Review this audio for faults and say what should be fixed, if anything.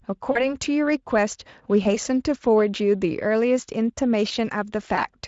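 Three dropouts from VoIP packet loss concealed by the speech codec: 0.31 to 0.55 s, 1.83 to 1.96 s, and 4.95 to 5.07 s. The decoder filled 40, 20 and 20 ms gaps by stretching its last pitch and filter into a fading buzzy tone or coloured noise, then needed a moment to recover. Adding forward error correction or a bit more jitter buffering on the link should stop this happening.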